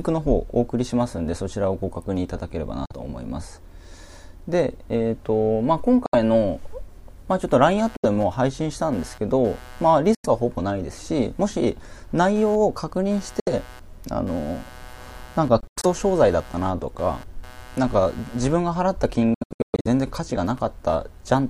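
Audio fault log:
2.86, 6.06, 7.96, 10.15, 13.40, 15.60–15.86 and 19.34–19.87 s, Bluetooth dropout: silent holes of about 45 to 95 ms, with the last two broken into scattered gaps up to about 0.4 s in total. Sound resumes as though it had played on, likely from lost wireless packets. They appear as sharp-edged blank vertical stripes on a spectrogram and flat gaps in the waveform.
7.78 s to end, computer activity noise: a buzzing pulse train at roughly 150 Hz, about 25 dB below the sound, from computer load changes disturbing the shared ground. It shows as evenly spaced vertical ticks on a spectrogram and a faint rough layer in the waveform.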